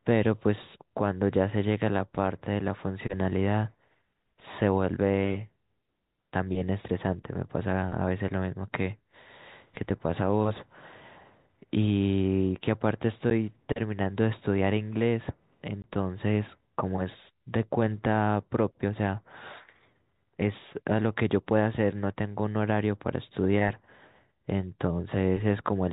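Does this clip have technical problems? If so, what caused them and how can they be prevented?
Yes, there's packet loss filled with silence: a 10 ms hole at 13.3 s and a 20 ms one from 15.82 to 15.84 s. That points to 10 ms packets that never arrived and were swapped for hard-edged silence. Packet loss concealment would smooth these over.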